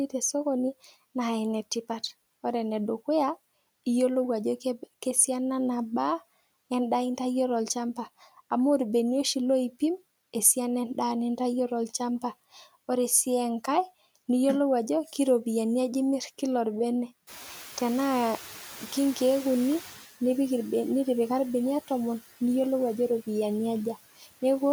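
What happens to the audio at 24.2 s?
At 24.2 s the noise suppressor cuts into the speech. This runs from 24.16 to 24.43 s. The suppressor mistakes part of the speech for background noise and turns it down with the noise. The deepest drop is about 16 dB. Roughly 150 ms of sound is affected across that span. Those parts sound swallowed and faint.

The same moment also carries noise suppressor artifacts, which run through the whole clip. The suppressor lowers the bands it treats as steady noise, frame by frame, by about 14 dB. So the background dips in the gaps and comes back under the speech.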